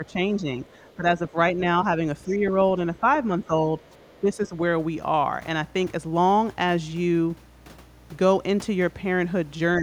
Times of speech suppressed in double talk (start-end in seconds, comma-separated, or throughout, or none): 0.00-1.36, 2.25-3.53, 4.21-4.54, 9.79-9.82